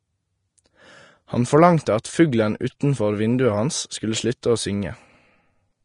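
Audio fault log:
Throughout, Vorbis compression: the speech carries a grainy, hissy top end with nothing at all above 10.5 kHz, and what treble is left has turned to noise, so tones sound rough and consonant onsets come out soft and blurred. That's the encoder lowering its cut-off and quantising the high-frequency detail so coarsely that it becomes noise of similar energy. The damage is plainly audible and fits a low bitrate around 32 kbps, likely from a Vorbis encode.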